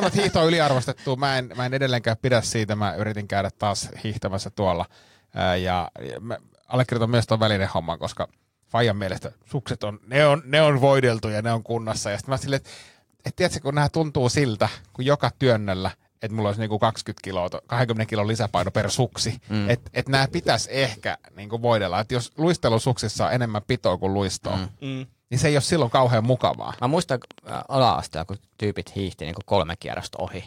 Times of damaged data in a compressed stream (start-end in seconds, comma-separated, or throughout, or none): none